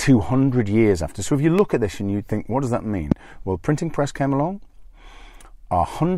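A voltage step or pulse, likely from a switch, plug contact or driver glitch, is getting into the signal path and being shaped by the stages after it. The result is a loud pop at 1.59 to 1.61 s, between "if you" and "at this and you", peaking around 10 dB above the speech. A second, louder loud pop follows at 3.12 to 3.14 s, just after "think what does that", roughly 20 dB up. Each is a single sharp thump, with the speech continuing underneath.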